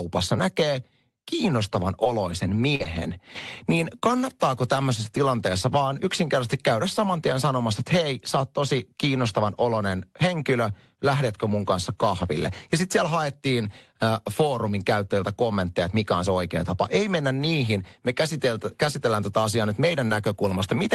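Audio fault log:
2.03–4.83 s, scattered short gaps: just after "näkee kiinnostavan" and running up to "tilanteessa vaan yksinkertaisesti käydä", a handful of packets, around four, went missing over the call path, the longest roughly 40 ms. About 100 ms of audio was lost, and the receiver covered 240 ms by stretching out the last sound, so you get small ticks and smeary hiccups in the speech. The top tops out near 12 kHz, as you'd expect from the call codec.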